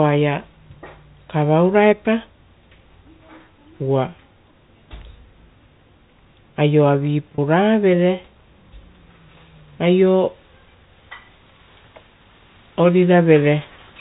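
At 7.35 s, one stretch of the stream, about 30 ms and consistent with a single lost packet, never arrived. The receiver filled it with packet loss with pitch repetition, looping the last pitch period so the speech briefly holds on a slightly buzzy, sustained tone over the G.711 telephone band.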